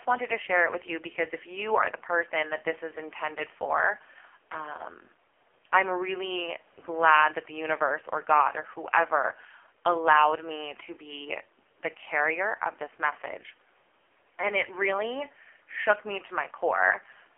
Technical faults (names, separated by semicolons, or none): AMR narrowband mobile codec